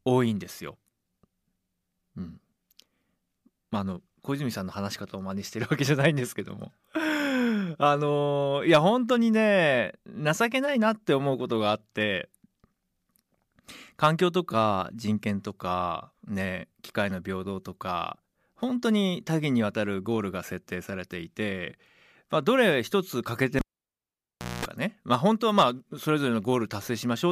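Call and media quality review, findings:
Cable pulled and plugged in, 23.59–24.65 s: pop, 1.01 s near silence including 0.22 s of 60 Hz mains buzz while only the plug tip touches, second pop as speech returns. Probably an analogue lead yanked.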